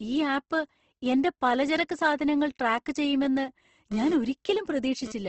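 A speech clip with nothing above 8.2 kHz and a grainy, rough texture, likely from Opus compression at a low rate around 16 kbps in music mode. From 3.92 to 5.12 s a hard, raspy GSM phone buzz cuts in and out at 217 Hz, about 14 dB under the speech, from a nearby phone doing a data transfer.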